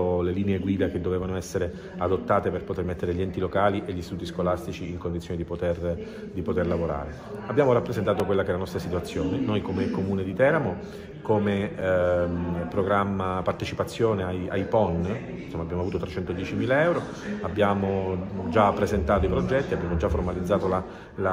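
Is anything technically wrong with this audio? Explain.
Yes. There are two blocks of digital silence, at 8.20 s and 11.81 s. Each time, the sound cuts out and returns with no fade. This most often happens when the output buffer is not filled in time. The first gap lasts 2.67 ms, which fits a 128-sample buffer. The second lasts 8 ms. The first is heard as a tick. The longer second one is also short enough to be heard as a tick or dip rather than a gap.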